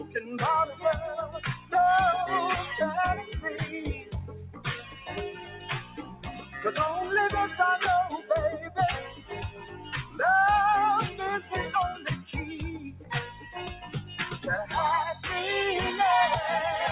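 The level pumps and thins all the way through, swinging by about 15 dB as held parts sink and onsets break through. This is a noise suppressor applied to music or sounds: a speech-tuned suppressor mistakes steady tones and tails for noise and turns them down. Everything is capped near 4 kHz, consistent with a G.711 A-law call path at 64 kbps. Sound is cut by the noise suppressor at 0.0–0.15 s (about 11 dB), 1.26–1.72 s (about 13 dB), 3.94–6.56 s (about 13 dB, most of that span), 8.62–10.19 s (about 12 dB), 11.95–12.31 s (about 11 dB) and 12.76–14.19 s (about 12 dB). In each, sustained or decaying material sinks or ends early.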